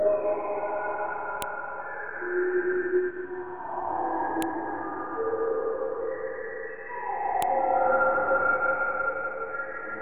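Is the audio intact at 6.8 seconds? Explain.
Yes, the audio is intact at 6.8 seconds, with no dropout, click, distortion or other fault at that moment.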